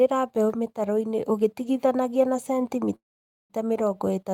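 At 2.95 s the speech stops and the last sound is briefly stretched into a fading buzz or hiss, then drops to silence for about half a second before speech resumes at 3.53 s, picking up exactly where it broke off with nothing skipped. This is a call audio freeze, most likely caused by packets held up in transit so the jitter buffer ran dry. The receiver padded the gap, adding roughly 0.54 s of delay to everything after it.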